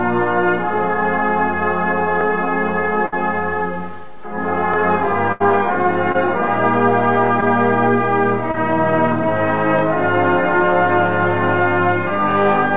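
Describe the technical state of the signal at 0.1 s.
At 0.1 s the signal is intact, with nothing above 4 kHz, which fits the narrowband G.711 mu-law coding of the call path.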